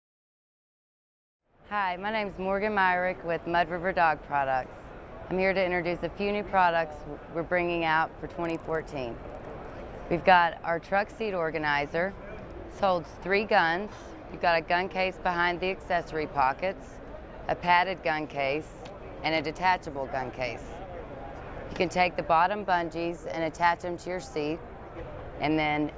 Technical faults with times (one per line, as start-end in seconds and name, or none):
8.45-10.05 resampler restarted on every block